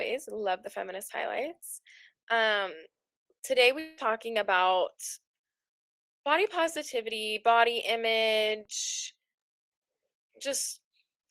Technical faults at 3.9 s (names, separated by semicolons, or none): long network dropout